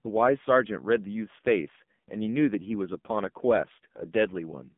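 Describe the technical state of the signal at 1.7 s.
At 1.7 s, as throughout the clip, the speech passes through an AMR narrowband mobile codec at a low rate, consistent with about 6 kbps: nothing above 3.5 kHz, and heavily buzzy, synthetic speech.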